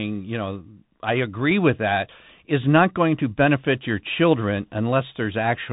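Throughout, the speech carries Bluetooth CVSD headset codec damage: nothing above 3.8 kHz, a flat spectrogram ceiling, scratchy s sounds and granular hiss from one-bit slope coding, fitting 64 kbps.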